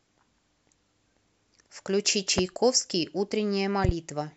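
Loud pops land at 2.38 to 2.41 s, a single sharp pop, and at 3.85 to 3.92 s, two pops in quick succession. Each peaks roughly 15 dB above the speech, which continues underneath. The likely cause is a sudden voltage step or pulse entering the signal path, as from a plug, a switch, static discharge or a driver glitch, which the following circuitry shapes into a brief, hard transient.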